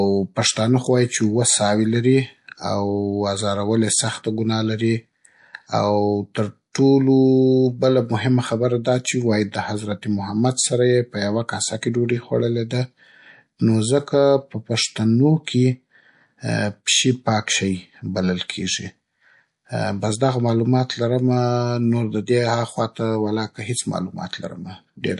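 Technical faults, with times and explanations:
Throughout, MP3 compression. The speech sounds watery and swirly, with dull treble and metallic chirps on s sounds. This likely comes from a low bitrate, about 48 kbps. Short of bits, the encoder cuts high frequencies and drops weak detail, which flickers between frames.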